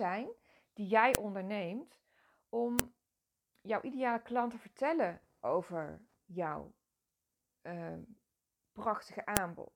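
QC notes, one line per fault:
1.15, 2.79 and 9.37 s (the first just after "die jij"): file header played as audio. Each joined piece's header bytes play as samples, giving a sharp, loud click over the speech. On the waveform it's a brief spike; on the spectrogram, a thin full-height vertical line.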